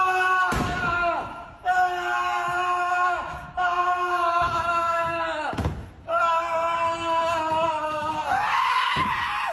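No technical faults can be heard anywhere in this clip.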